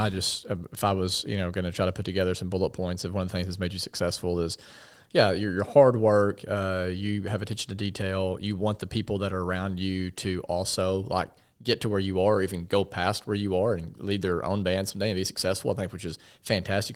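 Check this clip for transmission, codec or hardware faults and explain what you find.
No transmission, codec or hardware faults turn up anywhere in the speech. The Opus compression is working as intended, running at 24 kbps in hybrid mode with full bandwidth kept, so its mark on the sound is light.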